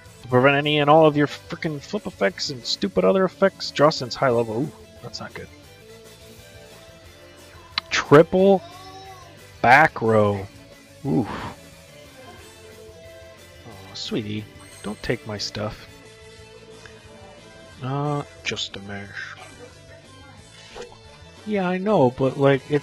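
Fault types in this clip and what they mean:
Adaptive stream at a lower bitrate, 16.0 s to the end: the connection slowed, so the player switched abruptly and gaplessly to a leaner version, which fits 96 kbit/s AAC dropping to 16 kbit/s HE-AAC. Nothing remains above 11.8 kHz, and codec artefacts rise.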